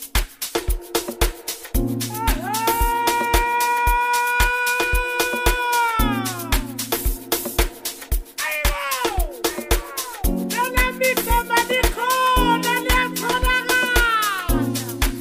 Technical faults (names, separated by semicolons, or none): none